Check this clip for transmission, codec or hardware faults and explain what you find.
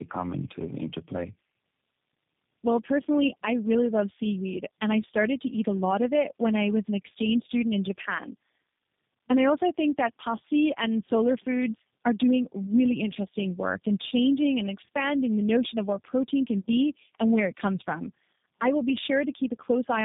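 There's one problem, and it runs the whole clip: tandem speech coding. It sounds like about three low-rate speech codecs in a row, likely AMR-NB then G.729A twice, each re-encoding the last one's errors. The result is rough, muffled, warbly speech with nothing above 3.8 kHz.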